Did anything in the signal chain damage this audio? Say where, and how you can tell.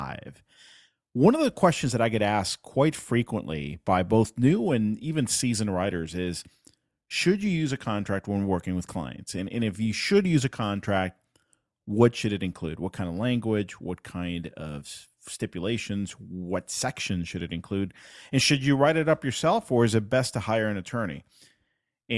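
No, nothing in the signal chain damaged this audio.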